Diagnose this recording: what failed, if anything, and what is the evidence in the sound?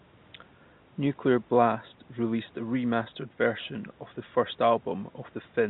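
Nothing in this speech recording points to a failure at any stage of the chain. The sound is band-limited with nothing above 4 kHz, the expected narrowband response of a call path using a G.711 mu-law codec at 64 kbps, while the microphone processing upstream takes out the lowest bass with its high-pass filter, which is normal.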